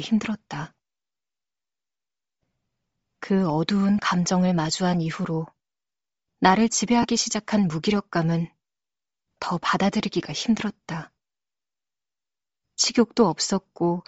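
Throughout the speech, the upper spectrum sounds thin and filled with a grainy, breathy hiss, and the codec damage is plainly audible. This is likely Bluetooth LC3 compression at a low bitrate, which fits about 32 kbps with 7.5 ms frames, zeroing high bands and filling them with noise.

At 3.98 s there is a brief noisy smear, which fits a single 7.5 ms frame. A slightly longer smear from 7.02 to 7.05 s points to two frames. These are lost LE Audio frames, where the decoder reused the previous spectrum with randomised signs.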